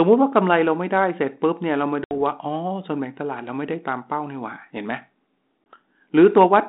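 Hard silent holes at 2.04 to 2.13 s and 5.73 s, with the speech returning briefly distorted: packet loss on an ADPCM call, which desynchronised the decoder's predictor.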